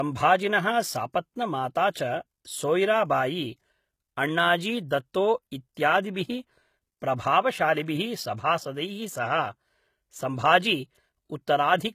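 From start to finish, the speech sits under a hard ceiling: there's nothing above 14.9 kHz, and the artefacts of a heavy low-bitrate encode run all the way through. The cause is likely low-bitrate audio saved at a high bitrate. Something like a 20 kbit/s HE-AAC stream was re-encoded to a generous MP3. The big file can't bring back what the first codec threw away, so its damage carries straight through.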